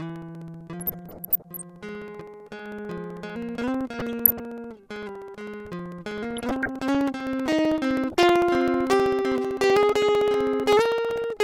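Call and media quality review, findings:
Periodic USB or driver dropouts: bus or audio driver stalled every 64 ms, 0.09 to 11.37 s. Each stall loses around 2 ms, filled with silence. Heard as a steady tick train through the music, around two hundred ticks.

DAB burbling: weak DAB reception, bit errors (a few tenths of a percent) passing error correction into MP2 data. Corrupt sub-band samples give short noise blips; corrupt scale factors make sub-bands jump in level for up to a frame. Burbling over the music at 0.81 to 1.62, 3.95 to 4.42, 6.23 to 6.68, 8.12 to 8.29 and 11.09 to 11.22 s.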